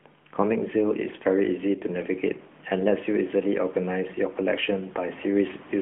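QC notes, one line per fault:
No faults found.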